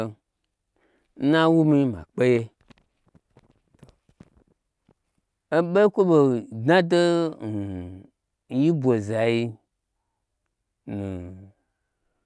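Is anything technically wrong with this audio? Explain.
No, nothing is technically wrong.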